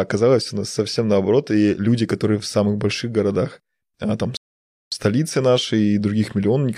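A speech recording where, right after "больших городах а там", the sound drops to silence from 4.37 to 4.92 s and then picks up exactly where it stopped, adding about 0.55 s. This is a rebuffering stall: playback exhausted its downloaded audio and paused until more data arrived.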